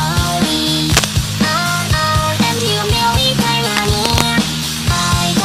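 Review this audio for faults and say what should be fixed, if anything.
Cable scratch noise at 0.89–1.05 s and 3.75–4.22 s: dense, ragged broadband bursts as loud as the sound, then slightly quieter, likely from a worn connector. These appear as grainy vertical smears on a spectrogram. Replace or reseat worn cables and secure them so they cannot shift during recording.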